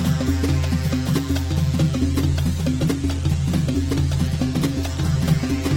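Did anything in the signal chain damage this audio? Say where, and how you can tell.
Yes. A doubled audio track runs through the whole clip: a second, full-band copy of the sound trails the original by around a second at roughly the same level. It has no decay and no room colouring, so it is not an acoustic echo. It is a clean duplicate held out of step. The likely cause is the capture or buffering stage, where a second, slower path records the signal again and mixes it back in.

From 1.94 s to the end there is an adaptive stream at a lower bitrate. The quality drops suddenly, and coding artefacts become more obvious. There is no dropout at the switch. That points to the network stage: the connection slowed and the player changed to a lower-quality rendition. The change in sound fits a step down from about 64 kbit/s to 16 kbit/s Opus.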